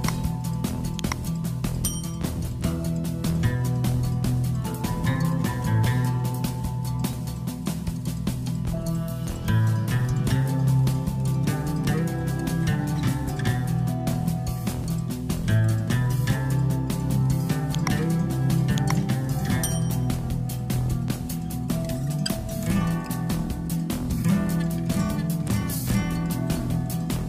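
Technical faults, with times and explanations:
7.13 s and 14.84 s, damaged data in a compressed stream: you get a brief glitch at each of these two points. A bit of the encoded data is garbled there, so the decoder can't make sense of the frame it's reading. It drops sync and hunts forward for the next valid frame header, then picks up again. Those moments of misread data are what come out as the quick glitch.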